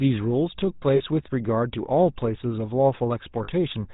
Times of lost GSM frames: 0.96-1.03, 3.44-3.49

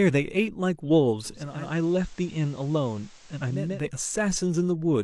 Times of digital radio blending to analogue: 1.24-3.93

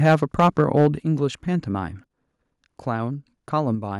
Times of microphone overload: 0.04-0.87

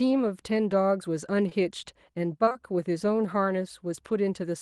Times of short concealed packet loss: 1.49-1.53, 2.45-2.56

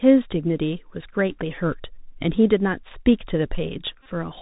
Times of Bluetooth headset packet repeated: 4.03-4.06

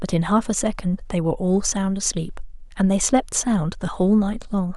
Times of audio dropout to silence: none

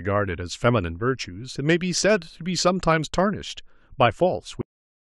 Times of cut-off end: 4.61-5.02

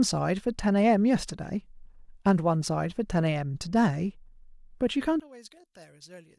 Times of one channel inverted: 5.20-6.39

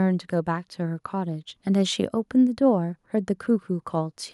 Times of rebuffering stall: none

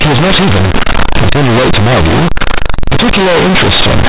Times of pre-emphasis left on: none

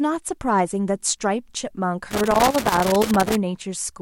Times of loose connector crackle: 2.11-3.35

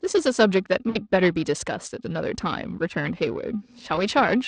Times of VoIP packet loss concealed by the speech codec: 0.89-0.97, 3.95-4.05

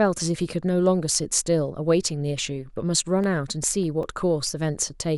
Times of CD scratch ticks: 3.24-4.23

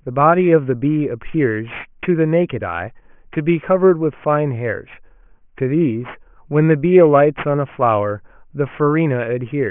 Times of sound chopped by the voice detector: none

